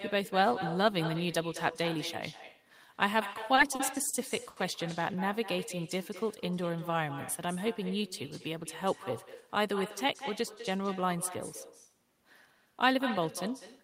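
A speech recording carries an echo with no canceller from start to finish. The far end is evidently playing the call over a loudspeaker, and its microphone is sending that playback back without any echo cancellation. Every phrase is followed, after roughly a fifth of a second of round-trip delay, by a fainter copy about 12 dB below the direct speech. The copy sounds thinner because it has passed through a loudspeaker and a room before being recaptured.

Between 3.33 and 4.58 s there are repeated stalls (stutter). The receiver's jitter buffer ran dry five times as packets arrived late or too slowly. Each time, the decoder stretched the last sound to cover the wait, concealing about 190 ms in total, or 15% of that stretch. The longest single fill lasted 70 ms. No audio is actually lost, but the speech visibly hesitates and drags in short hiccups through that second and a quarter.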